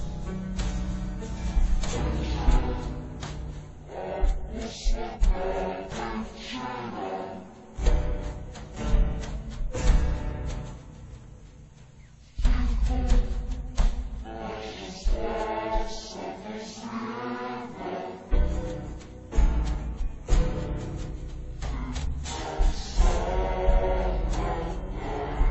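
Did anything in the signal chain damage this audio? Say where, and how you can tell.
Yes. From start to finish the sound runs at half speed and a full octave, 12 semitones, too low, with a fainter mirrored copy in the upper half of the spectrum. This is stereo read as mono, a fault at the sample-format and channel-layout stage. Left and right samples stored in alternation were read back as one channel, so each stereo frame became two consecutive mono samples. That doubles the duration and halves every frequency, while the alternation between the two channels produces the mirror image.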